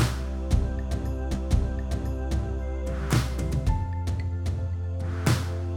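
At 1.34 s the player queued the same stream segment twice, so a stream segment is repeated: the following second of audio, up to 2.34 s, plays again. There is a small blip at the jump back, and the programme runs 1.0 s longer than it should.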